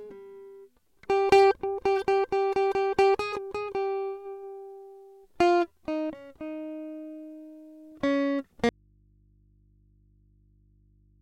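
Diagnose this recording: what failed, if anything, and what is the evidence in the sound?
The music cuts out abruptly at 8.69 s and never returns; from there to the end only mains hum remains, roughly 35 dB below the music. This is an audio dropout to a faint residue, most likely a failure in the analogue wiring, such as a connection coming loose and leaving the input open to pick up hum. On a waveform the envelope collapses to a thin band at 8.69 s. A spectrogram shows the broadband content vanishing, leaving only low, steady hum lines.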